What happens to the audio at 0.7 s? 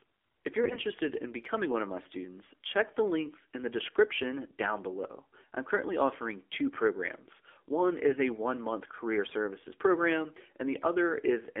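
From 0.64 to 0.79 s the speech turns hoarse, scratchy and gargly while keeping roughly its pitch and loudness. These are AMR bit errors. Over a span of a few 20 ms frames, a weak link flipped several percent of the less protected bits. The check on the critical bits still passed, so the decoder played the damaged frames instead of muting them. Its excitation pulses landed in the wrong places, and the fine pitch, gain and spectral values came out wrong.

Underneath, the same moment has the boxed-in, buzzy and synthetic quality of the AMR narrowband mobile codec. Energy sits between about 300 Hz and 3.5 kHz, with nothing above 4 kHz. The codec rebuilds the speech from a vocal-tract model driven by a handful of pulses per 5 ms subframe. Here that detail is plainly coarse, which fits a low mode of around 7.4 kbps.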